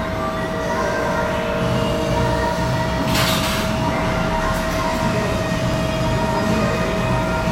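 A sound recording with overlapping chunks. Clicks at 2.73 and 5.74 s mark joins every 3.0 s, where about 7 ms of audio repeats.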